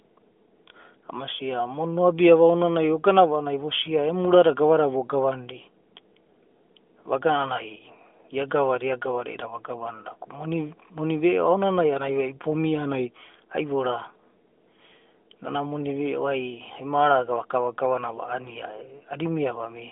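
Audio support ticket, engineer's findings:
No faults found in this speech clip. The path runs through an AMR narrowband mobile codec, with the band held to about 250 Hz to 3.6 kHz and only light coding texture, which fits the 12.2 kbps mode.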